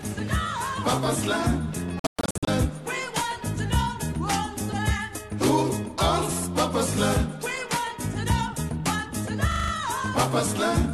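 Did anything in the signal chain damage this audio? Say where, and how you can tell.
Yes, in two places. At the receiver and decoder stage, a digital broadcast dropout occurred: corrupted or missing frames were muted. From 1.99 to 2.48 s the sound breaks into several silent holes across about 480 ms, totalling 336 ms lost, the longest gap 120 ms.

At the driver or buffer stage, a system hang loop occurred: the software stalled while the hardware kept replaying its ring buffer. From 9.52 to 9.72 s a 40 ms fragment repeats five times, a brief 25 Hz stutter, before normal playback resumes with essentially nothing skipped.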